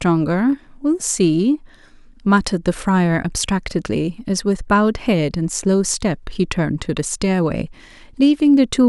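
Nothing stood out as a technical fault on listening to this speech recording.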